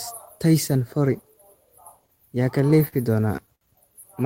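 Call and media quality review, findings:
Repeated stalls (stutter) in speech, 2.61–3.63 s. Eight brief holds, longest 60 ms, about 150 ms stretched. Jitter buffer underruns from late packets. Nothing lost; sound drags.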